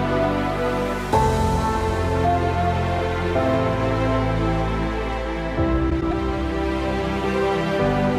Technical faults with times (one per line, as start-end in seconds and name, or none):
5.90-6.13 frames out of order